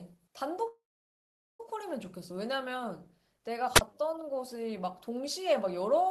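From 0.67 to 1.60 s there is a call audio freeze. The last sound carries on briefly as a fading buzz or hiss, then about 0.78 s of silence follows before the speech picks up exactly where it stopped. The likely cause is packets held up in transit, leaving the jitter buffer empty so the receiver had to fill about 920 ms. Unlike a dropout, nothing is cut out. The rest of the audio simply runs about 920 ms later.

At 3.75 to 3.81 s comes a wireless microphone squelch dropout. The analogue FM signal fades, a short rise of hiss is heard, and the receiver's squelch mutes the output for about 35 ms before the audio returns. What separates it from the earlier freeze is the hiss that leads into the hole and its much shorter length. There is no decaying buzz continuing the last sound, and the timing of what follows is not pushed back.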